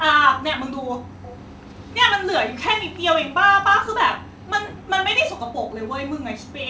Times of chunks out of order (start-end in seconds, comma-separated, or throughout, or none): none